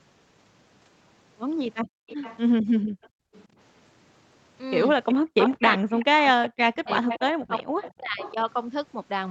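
From 1.83 to 2.07 s, and again from 2.80 to 3.34 s, the room sound beneath the speech suddenly dips away, falling by about 36 dB. The first dip lasts roughly 0.2 s and the second about half a second. This is background gated by the echo canceller: while the loudspeaker played, the canceller pulled the microphone down hard and then released it.

Between 2.07 and 2.39 s, a faint delayed copy of the speech trails about 373 ms behind the original, at about 20 dB below it. A weaker copy, at about 30 dB down, returns from 3.02 to 3.45 s. This is an echo leak, likely from a loudspeaker-side echo canceller that failed to remove everything its microphone picked up and sent the remainder back.

From 5.12 to 8.36 s, the talker's voice dips and breaks into pieces, totalling around one and a half seconds and falling by as much as about 40 dB. This is speech suppressed in double talk, likely because both sides spoke together and the canceller turned down the talker along with the echo.

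During that same stretch, the 373 ms echo grows much stronger. It is about 15 dB below the speech from 5.72 to 6.49 s and about 10 dB below from 7.08 to 8.34 s, which makes this the most obvious echo leak in the clip.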